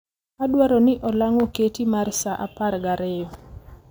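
Throughout the speech, crude rate conversion repeats samples unfiltered, which fits 32 kHz to 48 kHz, adding gritty inharmonic fizz that shows as faint mirrored spectrogram bands.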